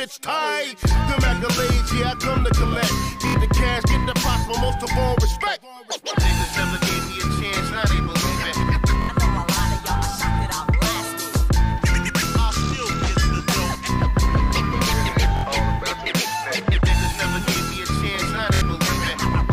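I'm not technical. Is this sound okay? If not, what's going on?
No. This is Bluetooth stutter: the wireless link briefly dropped or delayed the sound data, roughly three small chunks' worth each time, so the receiving device kept replaying the last short slice it had. You hear a quick buzzing, machine-gun stammer lasting about 70 milliseconds at 3.27, 9.02, 15.37 and 18.54 seconds. Then the sound jumps ahead and carries on as though it never paused, so a sliver of the sound is skipped.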